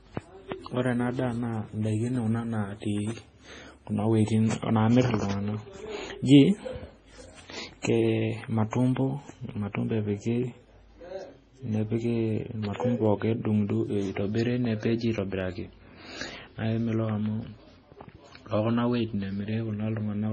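Throughout the speech there is nothing above 9.7 kHz, and two kinds of artefact are layered: smeared, swirly highs alongside a second, different graininess. That mix points to transcoding between lossy codecs, likely a low-bitrate MP3 re-encoded as AAC, rather than a single codec's one consistent texture. At 12.65 to 12.78 s a loud pop lands as a quick double hit, some 15 dB above the speech. Another double pop comes at 17.09 to 17.28 s, only about 5 dB above. Both are likely voltage spikes from a plug, switch or static. Unlike a dropout, the speech carries on unbroken beneath each pair.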